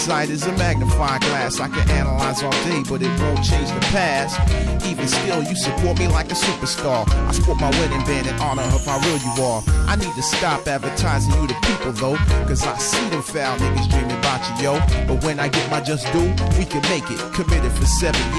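No technical faults can be heard anywhere in the audio; the signal holds steady and continuous throughout, with nothing interrupting or degrading it.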